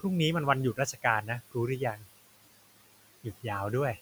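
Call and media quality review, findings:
Noise suppressor artifacts, throughout. Room noise, about 17 dB under speech, is pushed down about 17 dB between phrases and rises back under speech. Per-frame band gains make the background pump. Component: noise suppressor, steady-noise estimate.

Speech cut by the noise suppressor, 0.74–1.04 s and 1.78–2.06 s. Speech energy was taken for steady noise and attenuated with the background, deepest about 14 dB and about 12 dB. Roughly 0.1 s and 0.15 s of speech sound swallowed. Component: noise suppressor.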